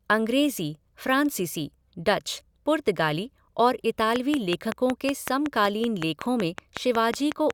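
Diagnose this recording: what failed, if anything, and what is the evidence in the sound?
A train of clicks runs from 4.16 s to 7.51 s, starting just after "फ़्रांसीसी डच पुर्तगाली और" and continuing almost to the end of the clip. The clicks are alike in shape, evenly spaced at about 5.4 per second, about twenty in all, and peak at roughly 15 dB above the speech, so they tick through words and pauses alike. A fixed-rate impulse like this points to the analogue wiring or the converter interface, likely interference from nearby equipment or a faulty connection or power supply.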